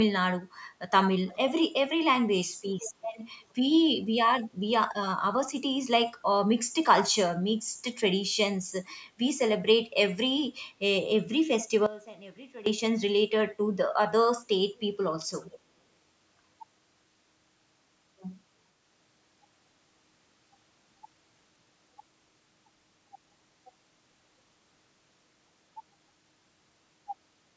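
It's a speech clip with two separate faults. The first is an echo leak, a delayed copy of the speech arriving about 423 ms after the original, at 1.26–1.63 s, 3.02–3.07 s, 14.76–14.80 s and 15.44–15.59 s. The first and last are the easiest to catch, roughly 20 to 25 dB below the speech. The two short ones are very faint, around 35 to 40 dB down. That fixed delay is the signature of the far end likely playing the call on a loudspeaker, with its echo canceller not fully removing what its mic picked back up, so scraps got sent back down the line. The second fault is one channel inverted, between 11.86 and 12.66 s. There the level suddenly drops by about 19 dB and the centre of the sound nearly vanishes, leaving a faint residue. That's what you get when one stereo side likely has flipped polarity and the two sides cancel on the mono sum. The band stops at 8 kHz, which is just the call's mic processing.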